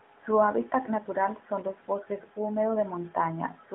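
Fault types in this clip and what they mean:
No faults are present; the speech comes through an AMR narrowband mobile codec path at 12.2 kbps, which limits it to a telephone band of 200 Hz to 3.6 kHz and leaves only light coding damage.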